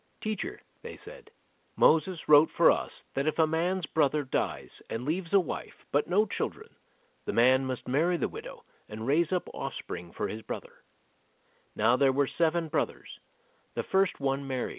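No faults are audible anywhere in this speech recording.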